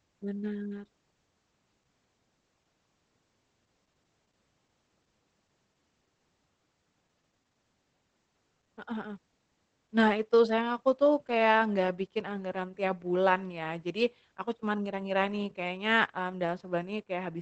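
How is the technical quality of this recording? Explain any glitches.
The recording is noticeably degraded by Opus voice compression throughout the speech, which fits a low bitrate around 12 kbps in SILK mode. Its wideband setting leaves nothing above 8.7 kHz, and the coarsely coded excitation makes the voice hoarse and slightly robotic. A simple low-pass filter would muffle the top end without adding that roughness.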